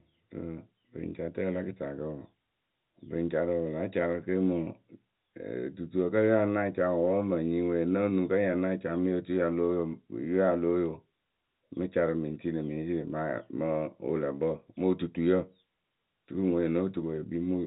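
No technical faults are audible.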